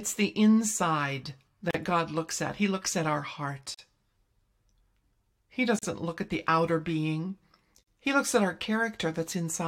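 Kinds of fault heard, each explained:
Gap at a join of encoded pieces: separately encoded pieces joined untrimmed leave 37 to 43 ms silences every 2 s, evenly spaced and resuming exactly where sound stopped, unlike random dropouts.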